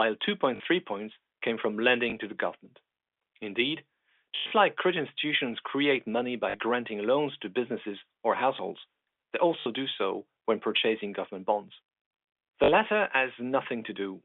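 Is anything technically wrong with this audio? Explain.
Yes. The speech has packet loss with the last packet repeated, at 0.56, 2.1, 4.36 to 4.52, 6.5, 9.6 and 12.64 s. The longest gap, 140 ms spread over 160 ms, ends just before "like credit institutions create". Others follow "credit institutions create money" and "businesses or households they". The receiver replays the last received packet to fill each gap. The repeats seldom align with the pitch. A longer run buzzes at the packet rate, about 50 Hz, which fits 20 ms packets. The result is a brief robotic stutter. The G.711 telephone coding limits the band to roughly 250 Hz to 3.5 kHz.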